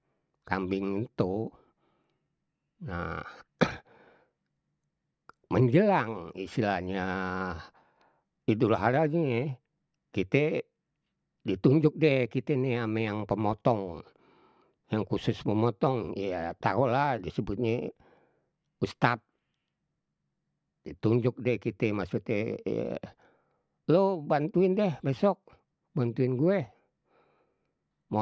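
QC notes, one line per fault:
No faults heard anywhere in the speech.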